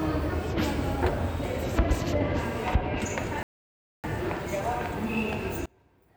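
A recording of sounds with two distinct faults. At 3.43 s the audio cuts to silence mid-flow for about 0.61 s and resumes at 4.04 s. This is a playback stall, most likely the player running short of data or its output thread being blocked until it could refill. From 5.66 s to the end, the sound collapses to a residue about 30 dB quieter, with its centred content almost gone. That points to one channel inverted: with one side's polarity reversed, summing to mono cancels everything common to both channels and leaves only their difference.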